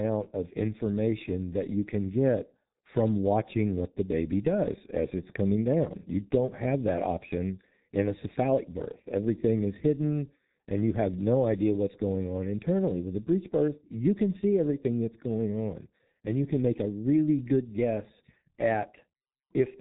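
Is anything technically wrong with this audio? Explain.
Yes, the whole clip has been through a G.723.1 codec, and it's hit hard. The speech is muffled and hoarse, with nothing above about 3.8 kHz, smeared consonants and a slow-updating voice model, which fits a 6.3 kbit/s stream in 30 ms frames.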